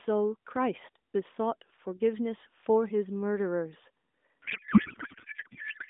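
From 4.42 s to the end, a codec payload misread turns the speech into garbled AMR warble, likely octet-aligned frames being read as bandwidth-efficient, so every field lands in the wrong place.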